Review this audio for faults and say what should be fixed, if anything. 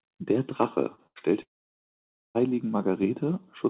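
An electrical switching spike lands at 0.63 s: a sharp snap laid over the speech, most likely from a nearby switch, relay or static discharge coupling into the audio line. On a waveform it is a near-vertical needle standing out from the surrounding envelope, and on a spectrogram a thin vertical stripe spanning the whole band, here topping out at 4 kHz because the call path is band-limited, which fits G.711 mu-law. Shielding cables and separating audio wiring from switched loads would prevent it.

Short concealed packet loss occurs twice, at 0.95 to 1.01 s and at 1.19 to 1.24 s, each time about 30 ms of audio that never arrived. The receiver bridged each hole by extending the last sound before cross-fading back, so it is heard as a quick smear or wobble. On a spectrogram the harmonics or noise texture freeze briefly into flat, repeated bands, and the waveform shows a short, overly regular stretch. 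A larger jitter buffer and forward error correction would reduce these.

A burst of packet loss runs from 1.07 to 1.19 s, about 90 ms missing, followed immediately by the second short loss. Roughly 87 ms was filled by continuing the last sound while turning it down, heard as a held buzz or fading hiss before speech resumes further along with that portion gone. A spectrogram shows smeared, unchanging bands dimming toward the join, and the waveform a tapering, repetitive section. Redundant encoding or retransmission on a more stable network link would prevent it.

A long network dropout follows from 1.42 to 2.38 s, with about 930 ms of audio lost, most likely from the connection stalling entirely. The last sound is briefly continued and fades, then about 0.88 s of silence remains before speech returns with the intervening content absent. On a waveform this is a flat line after a short decaying tail, and on a spectrogram an empty dark block. 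A more reliable connection, with monitoring and reconnection handling, would prevent it.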